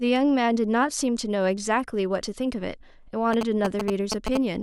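A short speech clip with GSM signalling bursts cutting in from about 3.33 s to 4.37 s: that galloping dit-dit-dit of ticks and brief buzzes at around 217 Hz, sitting roughly as loud as the speech itself. A 2G phone nearby was doing its signalling chatter, sending clustered radio bursts, and something in the audio chain rectified that RF and turned the burst envelope into audible clicks and buzz.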